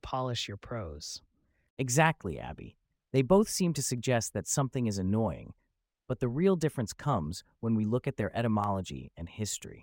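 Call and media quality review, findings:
Single sharp clicks in the speech at 3.16 s, 3.98 s and 8.64 s. Each is a thin vertical line across the spectrum, with no audible gap. Dropped samples, likely in the capture or buffer-handling path: a fraction of a millisecond of the stream is missing each time, so the waveform steps straight from one value to a later one. That discontinuity is what produces the click. Too brief to remove any sound, and isolated rather than periodic.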